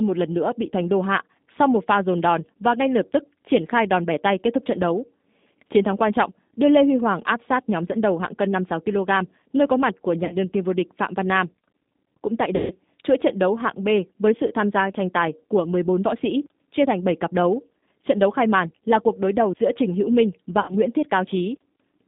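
From start to finish the speech passes through a G.729 codec, at 8 kbit/s in a band of roughly 150 Hz to 3.7 kHz. The damage is plainly audible: a rough, slightly synthetic edge from rebuilding each 10 ms frame out of a vocal tract filter, a pitch predictor and a few pulses. A simple low-pass filter would only dull the sound. This codec also adds a rough, synthetic texture, which sets it apart.

VoIP packet loss concealed by the speech codec occurs three times. From 10.25 to 10.34 s, between "nơi có mặt của" and "đương kim vô", about 40 ms of audio is lost, which fits two 20 ms packets. From 12.56 to 12.76 s, just before "chuỗi trận đấu hạng", about 140 ms is lost. From 20.60 to 20.74 s, about 80 ms is lost. At each point the decoder extends the last pitch and filter into a fading buzzy tone or coloured noise rather than leaving silence, and that is what distinguishes it from a plain dropout. 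The sound stays weakened for a short while after each gap.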